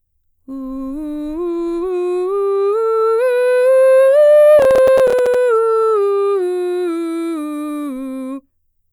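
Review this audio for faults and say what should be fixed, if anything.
Processor overload crackle runs from 4.59 to 5.34 s, a gritty burst of crackle riding on the music. The processor fell behind and missed the deadline for roughly fifteen audio buffers, which sound like around 5 ms each. Each missed buffer came out as a short hole of silence with abrupt edges, and the rapid string of those hard-edged dropouts produces the tearing texture until the load eases and playback recovers. To prevent it, reduce the processing load or increase the buffer size so each block can be finished before its deadline.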